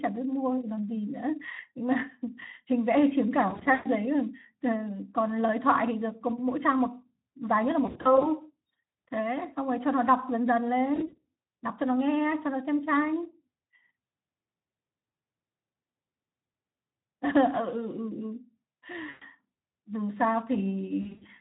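A speech recording with VoIP packet loss concealed by the speech codec: packets dropped at 3.49–3.88, 7.85–8.27, 10.95–11.25, 19.09–19.24 and 21.01–21.28 s, and the decoder extrapolated the missing stretches, so the voice smears into buzzy, fading fragments over the lightly Speex-coded sound.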